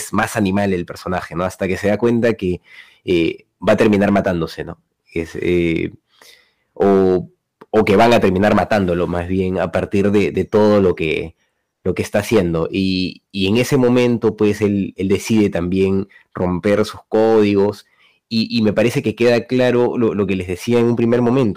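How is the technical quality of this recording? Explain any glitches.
The technical quality is poor because of one fault that runs through the whole recording. Hard clipping affects the speech from start to finish. The signal is driven about 15 dB beyond what the recording stage could pass. Every peak that exceeds the limit is sliced flat. Only a few percent of samples go over, but they sit on the loudest moments. The flattened tops create high harmonics. The result is a harsh, gritty fuzz on each loud syllable.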